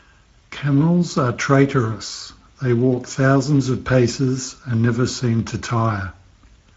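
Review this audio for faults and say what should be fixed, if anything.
Speex codec damage runs through the whole speech clip and is plainly audible. Too few bits go to the excitation signal, so the voice comes out noisy and hoarse, which fits a middle Speex setting of around 16.8 kbps. On a spectrogram, harmonics look blurred and broken up by noise-like texture between them, while the waveform shows rough, grainy voiced cycles. To prevent this, record or transmit with a higher Speex quality setting or a more modern codec.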